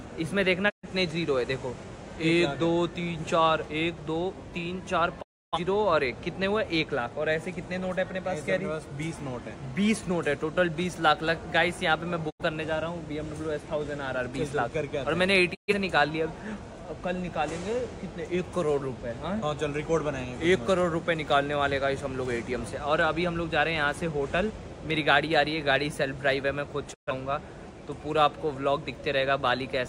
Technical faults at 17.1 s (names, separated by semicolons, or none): none